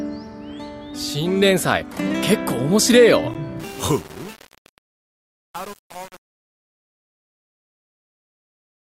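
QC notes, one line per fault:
3.60–8.97 s, truncation distortion on the fade: as the fade-out runs down, the tail goes gritty, with the waveform breaking into coarse steps because the level stage drops bits without dither. The roughness fits roughly 7-bit resolution.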